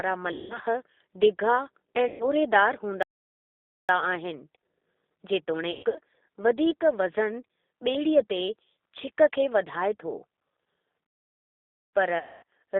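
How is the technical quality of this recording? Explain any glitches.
Technical quality is poor: the speech is carried by a low-rate phone codec and is broken by four dropouts and two playback stalls.

Throughout, the G.729 codec rebuilds each short frame from a filter model and a handful of pulses. The sound is consistent with 8 kbit/s G.729. It is confined to 300 Hz to 3.7 kHz, so the speech is audibly rough, thin and synthetic.

At 0.32 to 0.59 s, 2.08 to 2.26 s, 5.71 to 5.99 s and 12.18 to 12.43 s, there is VoIP packet loss concealed by the speech codec. The decoder filled each gap by extrapolating its last frame. The missing stretches are about 180, 120, 180 and 240 ms, with the third scattered over about 240 ms. In those gaps the speech smears into a fading buzzy tone and then takes a moment to recover.

At 3.03 to 3.89 s and 11.07 to 11.93 s, there are playback stalls of about 0.86 s each. 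They are likely caused by the player running out of data. The sound halts mid-flow into silence, then resumes.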